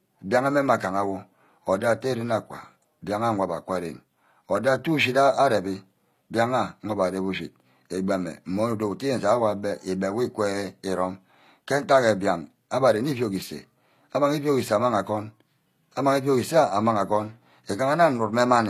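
The speech was likely squeezed through HE-AAC compression, which fits a low bitrate around 24 kbps: the upper band is rebuilt from copied lower bands rather than coded. Throughout, s sounds turn gritty and lispy, and nothing survives above 14.9 kHz.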